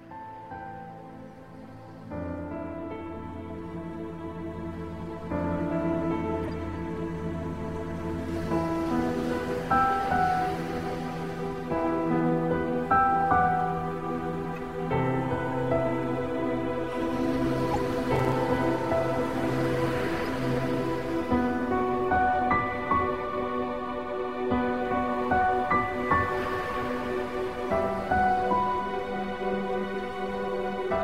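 Three short bursts of corrupt frame decoded appear in the audio, at 6.42–6.50 s, at 14.56 s and at 17.71–17.79 s. Each is a chirpy, squeaky blip where damaged compressed frames were decoded with misread gains or codes, throwing energy into the wrong frequencies. The first and third span a few frames and are fairly loud, and the one at 14.56 s is a single, quieter frame. Each blip is a brief tonal splash of wrong spectrum. That sets them apart from the processor overload crackle at 18.16–18.32 s. There, several deadlines in a row were missed on what sounds like buffers of about 5 ms. Each miss dropped in a small hard-edged hole of silence, and a handful of these together give a gritty tearing that rides on the sound until the load eases.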